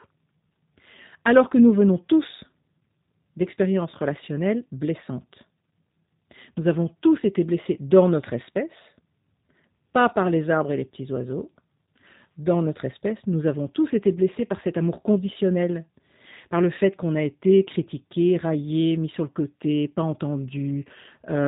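From start to finish the speech carries G.729 codec damage. Everything is rebuilt from a vocal tract model plus a few pulses, which fits an 8 kbit/s coder. Nothing above 3.8 kHz survives, and the synthetic roughness is plainly audible.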